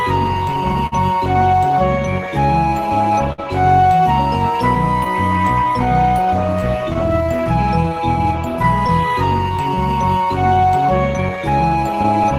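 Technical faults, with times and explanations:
Throughout: clock drift between sender and receiver. The sending clock runs a few percent slow relative to the receiver, so the jitter buffer keeps draining faster than it is refilled. To avoid running dry, the receiver has to stretch the stream continually. The result is a faintly uneven pace across the whole clip rather than one identifiable event.
0.54 to 11.51 s: repeated timing corrections. To keep pace with the slow sender, the receiver repeatedly inserts short stretches of repeated material, all in the lengthening direction, at irregular spacing. The effective playback rate settles near 98%, and roughly a third of a second is added over the span. Each insertion is small, so it comes across as slight hiccups and a tempo that drags unsteadily.
0.72 to 5.07 s and 6.94 to 9.60 s: scattered short gaps. In the first stretch, about seven small holes appear, probably from late or lost packets. 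Each is patched by extending the preceding sound, with roughly 150 ms filled in total and the longest near 50 ms. The second stretch has about five briefer holes, around 50 ms filled altogether, each near 10 ms or less. These register as isolated ticks and brief smears.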